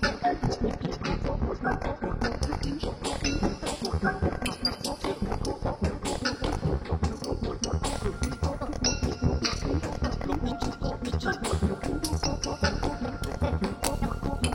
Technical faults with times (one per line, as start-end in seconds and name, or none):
0.00-6.00 adaptive stream starting at a low bitrate